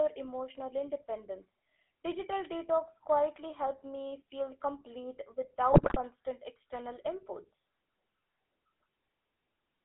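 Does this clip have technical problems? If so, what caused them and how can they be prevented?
Yes. Throughout, the speech sounds buzzy and gravelly and is confined to roughly 250 Hz to 3.5 kHz. This points to the GSM full-rate codec at 13 kbps, which rebuilds the voice from a coarse pulse excitation. Preventing this means carrying the call over a wideband or higher-quality codec instead of GSM full rate.

From 5.72 to 5.97 s, between "helped me feel complete" and "external inputs", the voice breaks into squawks and gargling. These are GSM bit errors: corrupted filter, pitch and gain values distort each frame they reach. A stronger radio link or better channel error protection would keep flipped bits from reaching the decoder.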